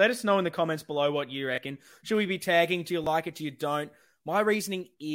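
At 1.56 to 1.58 s, just after "comments below what you", new audio failed to reach the output in time, so the device replayed its last buffer once: a repeated buffer. A piece of about 23 ms, which fits a 1024-sample buffer, sounds twice with a hard join, and roughly 20 ms of real audio is skipped. The result is a brief stutter-like click in the speech.

From 2.15 s to 4.94 s, pre-emphasis was left on: the treble boost applied before recording was never undone by the matching de-emphasis, with a shape consistent with the CD 50/15 µs curve. Content near 10 kHz sits about 8 dB higher relative to 1 kHz than it should, so the speech turns thin, bright and hissy on sibilants.

Within that stretch, at 3.04 to 3.07 s, a second repeated buffer occurs, again about 23 ms played twice with a hard join and roughly 20 ms lost, giving another short stutter.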